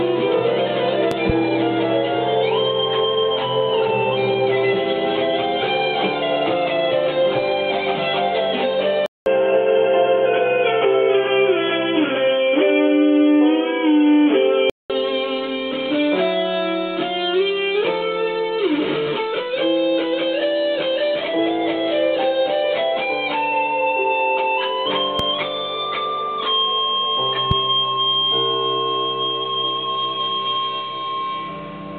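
At 1.11 to 1.32 s, a loud pop arrives as two sharp thumps, about 15 dB above the sound, likely a voltage pulse from a plug or static; the waveform shows two tall spikes, the spectrogram two full-height vertical lines.

From 9.06 to 14.90 s, the input switched to a poorer device, likely a headset call profile. After a 200 ms gap, the sound turns boxy at much the same level, with a faint new hiss. The spectrogram is blank above 3.4 kHz until full bandwidth returns.

Single pops follow at 25.19 to 25.22 s and 27.51 to 27.54 s, each a lone spike with the same likely cause.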